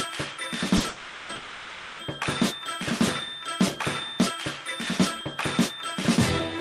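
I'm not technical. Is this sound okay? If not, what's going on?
No. Near the start the sound stumbles several times in a row.

First come two short stalls from a late packet, at 0.77 to 0.82 s and right after at 0.82 to 0.86 s. A piece of the audio arrived late, so the receiver held the last sound for about 30 ms and then 20 ms until it showed up. You hear a sound drawn out a hair too long, with a faint buzz, but nothing is lost.

Then come two longer call audio freezes, at 0.88 to 1.31 s and 1.35 to 2.01 s. The sound hangs as a fading buzz or hiss for about 0.4 s and then 0.6 s, likely because audio was held up on its way through the network. It never drops to silence, and it resumes exactly where it stopped. Unlike the short stalls, these gaps are long enough to hear as the sound clearly freezing.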